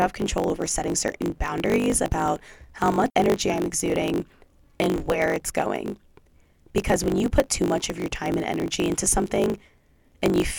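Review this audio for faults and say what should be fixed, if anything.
A block size mismatch (truncated) runs throughout this speech: a 50 Hz buzz underlies it, and the speech plays about 1.07 times fast at roughly normal pitch. This fits 1024-sample blocks being written but not fully read, so each block's tail is discarded. A spectrogram shows harmonics stacked at 50 Hz multiples, and the waveform shows a discontinuity every 20 ms. Making both stages use the same block size would prevent this.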